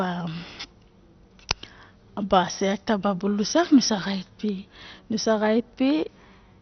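Throughout the speech, nothing reaches above about 6.1 kHz, and the remaining bands sound coarse, gurgling and granular, with a dull top. This is likely heavy MP2 compression: too few bits switch off upper sub-bands and starve the rest, pointing to roughly 48 kbps.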